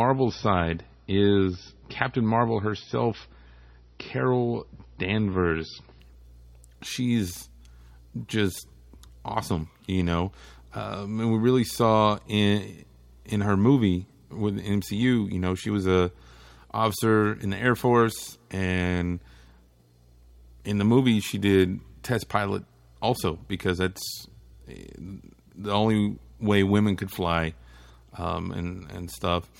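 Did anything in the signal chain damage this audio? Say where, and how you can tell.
Yes. It is an adaptive stream starting at a low bitrate. From 0.0 to 6.0 s the speech has nothing above 6 kHz and stronger codec artefacts, which fits MP3 at around 24 kbit/s. At 6.0 s the quality steps up at once, with no gap, consistent with 128 kbit/s. The player began on a cheap version of the stream to start quickly, then switched once it had measured the connection. A spectrogram shows a flat ceiling at 6 kHz that suddenly lifts.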